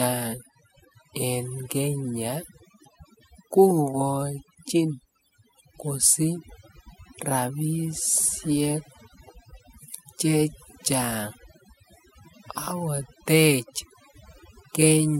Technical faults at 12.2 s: overdone noise removal

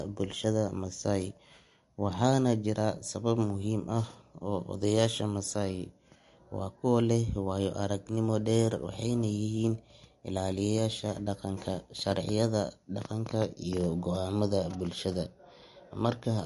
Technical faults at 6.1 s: MP3 compression

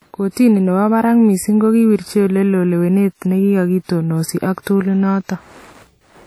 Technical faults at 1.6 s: WMA compression

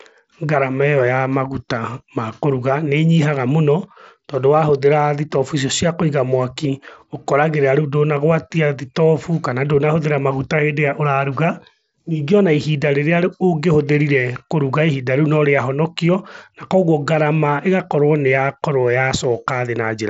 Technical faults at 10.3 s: none

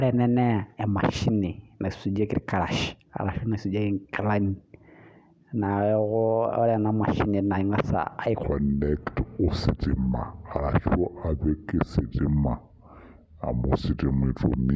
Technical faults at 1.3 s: none

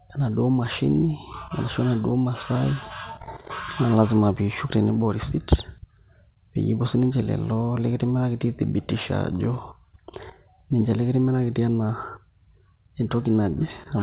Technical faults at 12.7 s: none

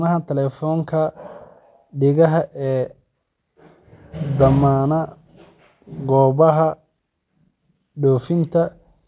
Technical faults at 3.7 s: none

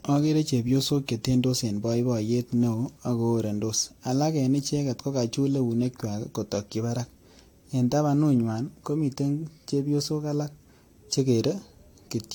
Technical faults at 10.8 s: generation loss

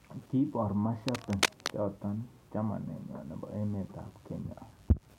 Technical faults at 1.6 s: cable scratch noise

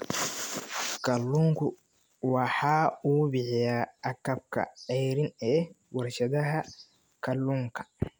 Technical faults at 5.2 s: none

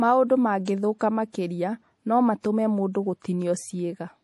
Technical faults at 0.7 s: MP3 compression; pre-echo

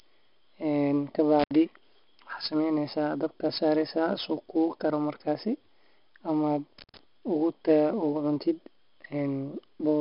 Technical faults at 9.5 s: 4-bit ADPCM compression

